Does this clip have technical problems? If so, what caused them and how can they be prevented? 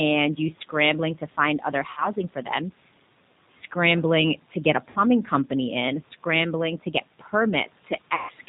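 Yes. The whole clip of speech has plainly audible G.729 codec damage. Its band stops at 4 kHz, and the slightly rough, synthetic texture fits an 8 kbit/s G.729A link. That codec rebuilds each 10 ms frame from a vocal tract filter, a pitch predictor and a few coded pulses rather than the true waveform. Room noise about 25 dB below the speech picks up a warble. Using a wideband codec such as G.722 or Opus would prevent this.

There are three dropouts from VoIP packet loss concealed by the speech codec. The first runs from 1.91 to 2.11 s, between "scrambling to find other" and "for them", with about 60 ms of audio missing. The second runs from 4.90 to 5.01 s, between "scrambling to get a" and "company in scrambling to", also about 60 ms. The third runs from 8.15 to 8.31 s, with about 140 ms missing. In each gap the decoder stretched its last pitch and filter into a fading, buzzy tone or coloured noise, and the voice stays weakened briefly after audio returns. 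Prioritising voice traffic with QoS and adding jitter buffering or forward error correction would prevent these dropouts.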